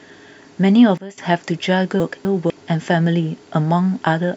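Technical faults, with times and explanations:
0.98–1.18 s, sudden gain jump: a gain step, likely applied without a ramp, drops speech and background together by about 16 dB for 0.2 s.
2.0–2.5 s, chunks out of order: a 250 ms chunk arrived one chunk late and plays after its successor, jumbling the speech at three hard joins.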